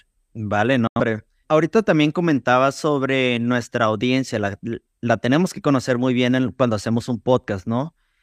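A digital broadcast dropout at 0.87 to 1.00 s: the receiver muted on failed frames, so the speech snaps silent within 3 ms and 85 ms is lost.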